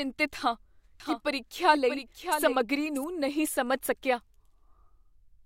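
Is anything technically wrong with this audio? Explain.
Yes. From 1.0 to 3.04 s, ending just before "ਨਹੀਂ ਸਮਝ ਸਕਿਆ", there is a doubled audio track. A second full-band copy of the speech trails about 0.7 s behind, roughly 5 dB quieter, likely from a slower second capture path. It sounds like a dry, overlapping echo that starts and stops abruptly. On a spectrogram, the speech pattern appears a second time, shifted right and slightly fainter, with hard edges.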